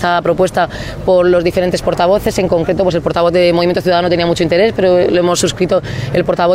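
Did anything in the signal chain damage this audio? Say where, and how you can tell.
No, nothing in the signal chain audibly damaged this audio.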